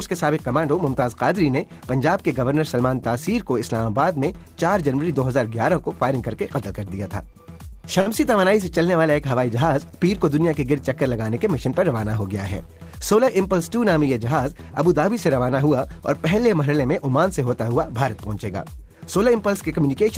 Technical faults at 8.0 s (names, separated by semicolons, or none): short stall from a late packet